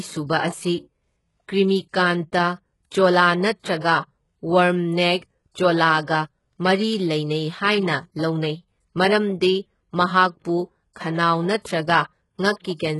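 All the way through, the top end of this speech has that synthetic, pasted-on quality, and it's likely HE-AAC compression at work. The codec keeps only the lower spectrum and rebuilds the treble by copying lower bands upward under a coarse envelope, so the highs sound gritty, and s sounds come out metallic and lispy. Everything stops at about 11.5 kHz, and the damage is heavy, which fits a bitrate around 12 kbps.

Near the very end, from 12.59 to 12.65 s, there's pre-echo: a short wash of hiss, about 53 ms long, creeping in just before a sharp attack. The transform block spread its quantisation noise evenly across its whole length, so noise meant to hide under the loud onset also fills the quiet gap ahead of it. The attack itself loses its edge and sounds softened and smeared.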